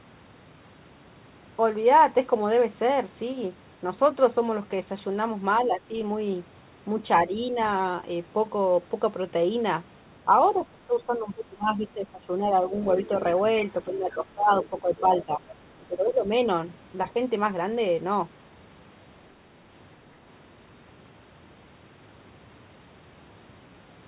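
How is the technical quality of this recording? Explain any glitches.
The speech has two recurring echo-canceller glitches between about 5.6 and 16.3 s, heard over a telephone-band sound with nothing above 4 kHz.

Speech suppressed in double talk occurs at 5.64–5.94 s, 7.27–7.33 s, 10.55–12.71 s, 13.85–15.44 s and 15.88–16.31 s. The voice dips or drops out, by roughly 10 dB, 5 dB, 20 dB, 15 dB and 15 dB. The likely cause is the echo canceller mistaking overlapping far-end talk for echo and ducking both.

The other side's voice leaks through at 12.90–13.07 s and 15.79–15.83 s. It is a faint scrap, roughly 25 dB and 35 dB below the speech. The echo canceller likely failed to remove all of the loudspeaker signal from the microphone.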